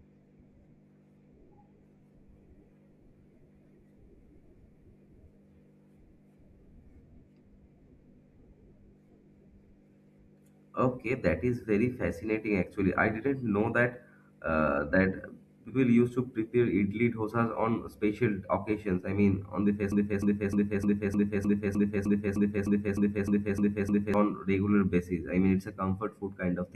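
A short stretch of this speech sticks and repeats from 19.92 to 24.14 s, a 0.31 s piece looping back to back 14 times. It's a broken-record loop, likely from a stalled player or stream resending its last fragment, so the original audio there is lost.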